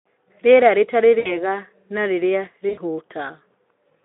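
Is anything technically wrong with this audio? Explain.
Yes. There is VoIP packet loss concealed by the speech codec at 1.19–1.50 s and 2.69–2.81 s. About 60 ms and 80 ms of speech are lost. The decoder extrapolates each gap into a fading buzzy or noisy smear, and the speech recovers only gradually afterward.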